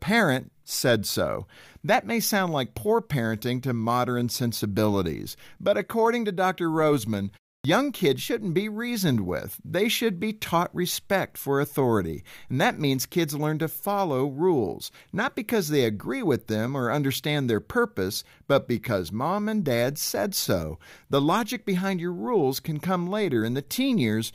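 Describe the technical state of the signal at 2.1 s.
At 2.1 s the speech signal is intact, with no audible dropout, distortion or other fault at that moment.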